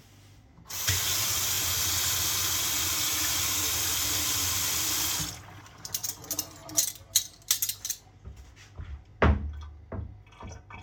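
Overlapping chunks: each 2.5 s chunk starts 20 ms early, so that slice repeats at every join, giving a regular stutter at 1.55, 4.07, 6.59 and 9.11 s.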